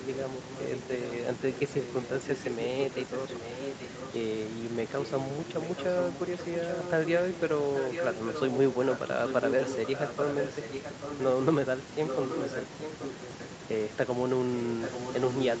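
A delayed second copy of the speech trails the talker by about 0.83 s at 0.46–0.76, 1.07–1.14, 1.55–4.11, 5.01–5.11, 5.48–7.40, 7.75–11.23, 12.06–13.45 and 14.57–15.6 s. It starts well below the direct voice, grows louder through 7.75–13.45 s, then recedes. This is an echo leak, likely from a far-end loudspeaker whose echo canceller failed to fully subtract the playback its microphone caught and returned.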